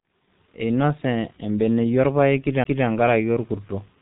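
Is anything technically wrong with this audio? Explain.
Yes, there are two faults. Throughout the clip the speech has passed through the G.723.1 codec, which codes it in 30 ms frames at a very low rate, consistent with roughly 6.3 kbit/s. The damage is heavy: nothing above about 3.8 kHz survives, and the slowly updated model of the voice cannot track fast changes. The speech therefore sounds muffled and hoarse, with smeared, indistinct consonants.

At 2.64 s there is a CD skip. The disc player's laser lost its track and landed on a different turn of the spiral, so playback cut out for a very brief moment and then resumed from another point in the recording. This is heard as a short tick followed by an abrupt break in continuity, where the speech suddenly picks up somewhere else instead of flowing on.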